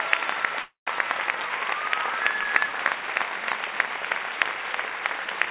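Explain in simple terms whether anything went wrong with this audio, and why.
From 0.62 to 0.89 s the sound stalls: a brief fading buzz, then silence, then it carries on exactly where it stopped, with nothing lost. This call audio freeze was likely caused by delayed packets leaving the receiver's buffer empty, so it stretched out the last sound until delivery resumed.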